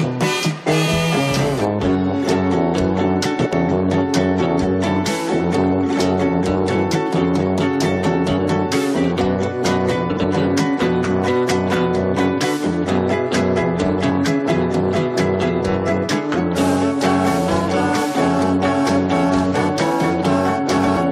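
Frames out of order at 3.38 to 3.54 s, 10.09 to 10.25 s and 20.78 to 20.98 s: in each, two adjacent blocks of audio were decoded in swapped order, so a short stretch plays back-to-front in halves. The blocks last about 70 ms in the first two events, which fits runs of three frames, and about 93 ms in the last, fitting four. Each sounds like a brief garbled flutter, with no time lost.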